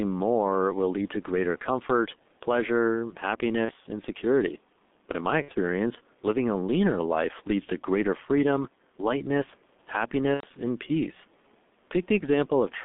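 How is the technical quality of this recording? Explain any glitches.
The recording is heavily degraded, with narrowband codec damage, level pumping, and three short dropouts that have been patched over.

G.723.1 codec, throughout: a low-rate telephony coder, consistent with roughly 6.3 kbit/s, keeps only 200 Hz to 3.6 kHz and models the voice coarsely, leaving speech muffled, hoarse, with smeared consonants.

Gain pumping, throughout: the level swells in pauses and dips by about 5 dB under louder syllables. The likely cause is excessive input gain being reined in by a fast limiter. The quiet room noise sits about 40 dB below the speech.

VoIP packet loss concealed by the speech codec, at 3.66 to 3.72 s between "to greater comfort pleasure" and "and security", at 5.42 to 5.52 s after "in my", and at 10.34 to 10.47 s before "and peace": the decoder extrapolated from its last pitch and filter, filling each gap with a brief, fading stretch of extrapolated sound. 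The lengths fit one, two and three missing 30 ms frames.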